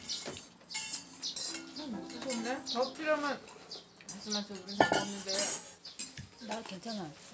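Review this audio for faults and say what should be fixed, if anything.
Nothing here needs fixing, since the sounds come across without any technical faults worth flagging.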